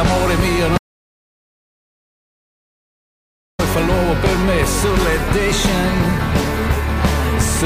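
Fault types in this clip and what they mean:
Audio dropout to silence: the sound cuts off abruptly at 0.78 s and returns mid-flow at 3.59 s, leaving about 2.8 s of silence with no room tone, most likely because the input signal was lost while the recorder kept writing silence.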